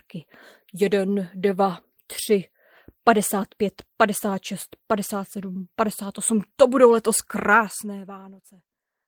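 Nothing goes wrong technically anywhere in this speech clip, so there's no fault to point to at any moment.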